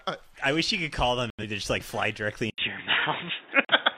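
At 1.30 s the sound drops to silence until 1.44 s. This is a corrupt frame muted. Damaged compressed data was rejected, and the player filled the gap with silence. The hole starts abruptly and lasts about two frame lengths. Timing carries on unbroken.

At 2.5 s there is a short silence, about 80 ms. Then the tone turns dull and boxy, with nothing above 3.8 kHz. The level shifts by about 5 dB. A new noise floor sits roughly 30 dB below the signal. The input likely switched to a poorer device.

At 3.65 s a second corrupt frame muted cuts out cleanly until 3.73 s. It is a single frame length of silence.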